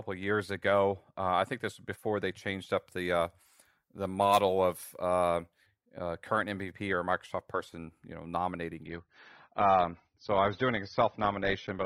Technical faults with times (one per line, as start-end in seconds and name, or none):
2.78-5.66 pre-emphasis left on
8.86-11.85 adaptive stream at a lower bitrate